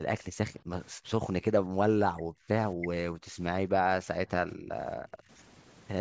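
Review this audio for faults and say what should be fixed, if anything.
Speech suppressed in double talk occurs eight times: 0.0–0.72, 0.91–1.19, 1.39–1.82, 2.04–2.48, 2.75–2.91, 3.12–3.4, 3.67–4.72 and 4.96–5.3 s. In each stretch the speech sinks sharply, by up to around 40 dB at its worst, or breaks into fragments before recovering. The likely cause is an echo canceller that, with both ends talking, treated the near talker as loudspeaker echo and attenuated it. To prevent this, tune the canceller's double-talk detection and suppression so near-end speech is held open while the far end speaks.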